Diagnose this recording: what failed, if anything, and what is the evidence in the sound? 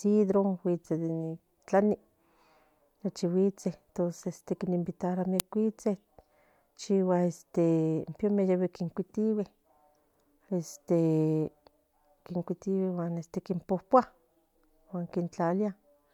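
Storage or file joining failed. A file header was played as audio, heard as a sharp click at 5.40 s in the speech. Header bytes were decoded as samples.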